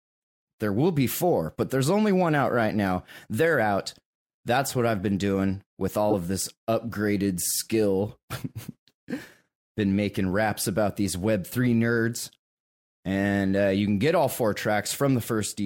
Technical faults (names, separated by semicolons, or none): corrupt frame decoded